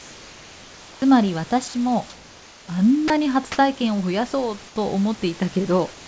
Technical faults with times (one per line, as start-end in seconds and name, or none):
1.68-1.74 sound dropped by the voice detector
3.08-3.10 sound dropped by the voice detector
4.68-4.76 comfort noise in place of the background